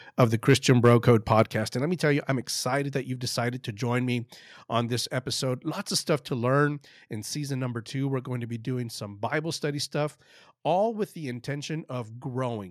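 Speech with microphone overload from 0.22 to 1.41 s. Peaks run about 2 dB past the limit and a small fraction are flattened, giving the loudest syllables a harsh crackle. At 1.44 s the microphone volume steps down by about 6 dB. Voice and background drop together, likely the call software reacting to the clipping just before it.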